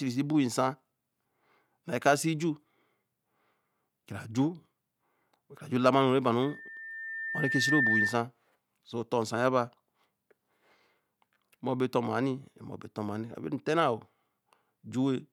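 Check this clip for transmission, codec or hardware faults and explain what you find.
A loudspeaker feedback squeal runs from 6.42 to 8.22 s. A microphone in this speech chain is picking up the loudspeaker it drives, and at 1.8 kHz the loop gain passes one, so that tone feeds itself. It swells over roughly a second and a half into a piercing whistle that ends up a few dB louder than the speech. On a spectrogram it is a bright horizontal line at 1.8 kHz that thickens as it grows, and in the waveform a steadily widening sinusoidal envelope.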